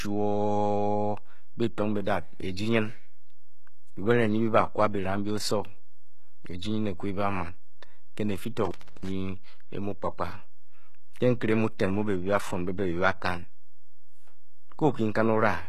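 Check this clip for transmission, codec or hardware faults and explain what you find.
Three faults turn up in this speech recording: a DC offset and codec damage running throughout, and one intermittent contact dropout.

DC offset runs for the full length. The waveform sits displaced from zero by a constant amount. You can't hear it directly, but it eats into headroom and shows up as steady energy at the very bottom of the spectrum.

Plainly audible codec damage also runs throughout. Nothing remains above 12.3 kHz, and the treble that does exist sounds synthetic rather than natural. The likely cause is HE-AAC compression at a rate that fits about 16 kbps. In that scheme, spectral band replication copies lower bands upward under a coarse envelope, so harmonics don't line up across the crossover.

Intermittent contact occurs from 8.65 s to 9.09 s, with the line open for about 0.32 s. A loose cable or plug briefly breaks the connection. 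The signal drops out, crackles at the edges of the break, and leaves faint hiss while the line is open.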